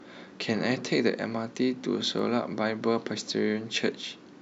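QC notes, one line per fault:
2.19 s, repeated buffer: a 1.45 ms slice of speech plays twice with a hard join, heard as a quick click. It fits a 64-sample buffer.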